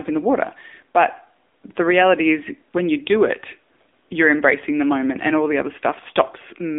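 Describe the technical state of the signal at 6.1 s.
At 6.1 s, as throughout, the speech passes through an AMR narrowband mobile codec. Its low-bitrate vocal-tract model, which fits roughly 8 kbps, leaves a buzzy, synthetic voice confined to about 250 Hz to 3.6 kHz.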